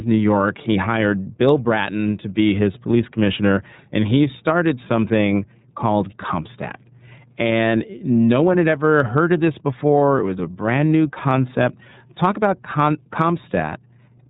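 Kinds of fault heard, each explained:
iLBC codec: the whole clip is narrowband, with nothing above 3.8 kHz, and the speech sounds plainly rough and synthetic. Each 30 ms block is coded on its own, which fits iLBC at 13.33 kbps, unlike a simple low-pass filter, which dulls sound without adding this grain.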